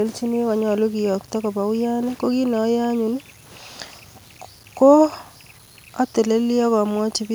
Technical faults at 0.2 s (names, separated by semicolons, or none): low bit depth without dither